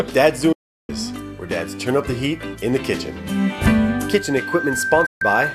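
From 0.52 to 0.90 s a digital broadcast dropout mutes the sound for 360 ms behind a quick 8 ms fade, a clean hole rather than crackle, as lost frames are discarded. At 3.60 s a loudspeaker feedback squeal starts: a single 1.6 kHz tone swelling over about a second and a half until it sits a few decibels above the programme. Its steady pitch marks a loop gain above one, not interference. A second dropout, 144 ms, mutes everything from 5.06 to 5.22 s.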